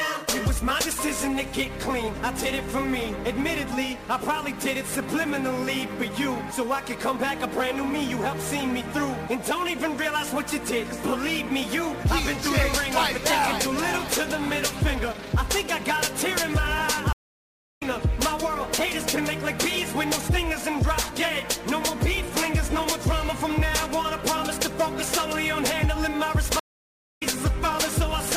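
Sample clock jitter runs through the whole clip. The converter's timing wanders by something like 10 microseconds, so each sample is taken a little early or late, and the resulting error sits around 20 dB below the signal. Because the error scales with how steeply the waveform is changing, it comes through as hiss and roughness that rises on loud, bright passages and disappears in the gaps. On a spectrogram this is a noise haze that tracks signal energy, strongest up high and absent in quiet stretches.

A stream reconnect occurs from 17.13 to 17.83 s, and another from 26.60 to 27.23 s. In each, the connection dropped, playback went silent for 684 ms and then 617 ms, and a fresh decoder picked the stream up again. The audio does not continue where it stopped. It jumps ahead by roughly 0.7 s, so that much material is simply missing. The waveform shows a flat gap followed by a restart that fades in, with no continuity across the join.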